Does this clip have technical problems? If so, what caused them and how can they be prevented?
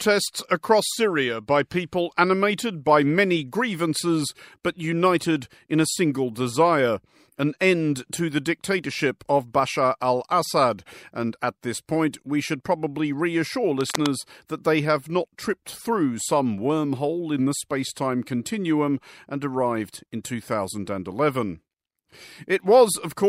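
Yes: cable scratch noise from 13.81 to 14.12 s, a burst of dense, uneven crackling laid over the speech at roughly 10 dB below it, most likely from a worn cable or connector shifting so its contact resistance jumped erratically. Secure cables with strain relief and replace worn leads or jacks before recording.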